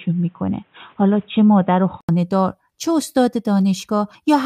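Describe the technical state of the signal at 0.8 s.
At 0.8 s the signal is in a band-limited stretch running from 0.0 to 2.09 s, consistent with an input switched to a poorer device, likely a fallback microphone or headset call profile. Nothing is present above 3.8 kHz, so the speech sounds dull and boxy, with a faint noise floor far below the signal and essentially no level change. The stretch ends with an 80 ms silence at the switch, after which full bandwidth returns.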